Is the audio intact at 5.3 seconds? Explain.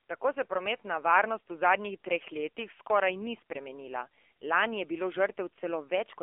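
No. At 5.3 s the speech sounds thin, boxed-in and buzzy, with a synthetic edge. This is the AMR narrowband mobile codec, present across the whole clip. It keeps roughly 300 Hz to 3.4 kHz and rebuilds the voice from a sparse vocal-tract model, plainly audibly, as fits a 7.4 kbps mode.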